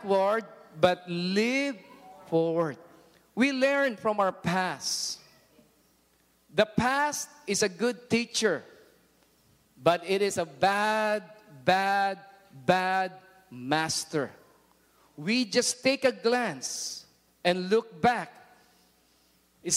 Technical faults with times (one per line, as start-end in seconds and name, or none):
none